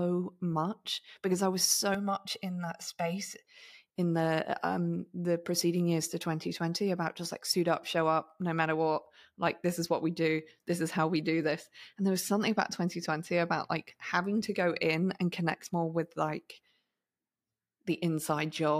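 Speech, with a stretch of channel delay (comb filtering) from 1.95 to 3.45 s: one channel lags by about 1.5 ms, so the mono sum cancels at evenly spaced frequencies starting near 300 Hz, sounding hollow and phasey. Unlike flanging, these notches stay fixed rather than sweeping.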